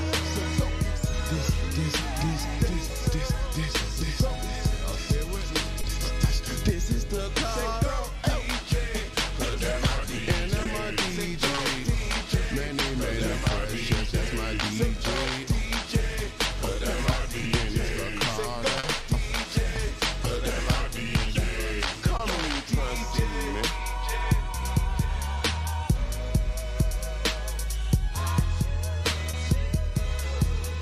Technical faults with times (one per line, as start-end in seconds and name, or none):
5.81-5.85 short concealed packet loss
10.63-10.67 short concealed packet loss
11.55-11.59 short concealed packet loss
18.79-18.85 short concealed packet loss
22.17-22.21 short concealed packet loss
29.31-29.35 short concealed packet loss